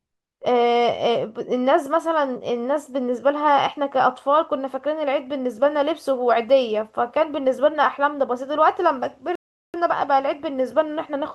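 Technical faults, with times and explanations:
9.35 to 9.74 s, rebuffering stall: the speech stops dead into silence for about 0.39 s, then picks up at exactly the point where it broke off, because playback used up its downloaded audio and waited for more to arrive. What separates it from a dropout or packet loss is that no sound is missing across the gap. The speech joins seamlessly on either side, and the pause simply adds time to the clip.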